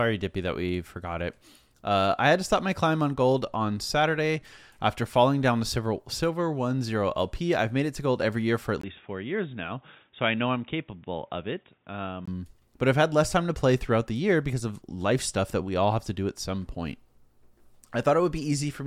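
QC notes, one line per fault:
8.81 to 12.28 s, input switched to a poorer device: after "every year for at" the sound drops out for about 20 ms, then comes back dull and boxy, with nothing above 3.8 kHz, roughly 5 dB quieter and with a faint new noise floor, until "but I've had less", likely a swap to a narrower-band headset mic.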